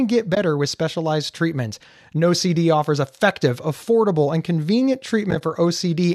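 At 0.35 to 0.37 s there is AAC frame loss with muting. About 20 ms drops to silence, fading softly out and back in. From 5.31 to 5.41 s it recurs as short, roughly frame-length gaps totalling 40 ms. The spacing suggests 10 ms frames, likely from the low-delay AAC compression.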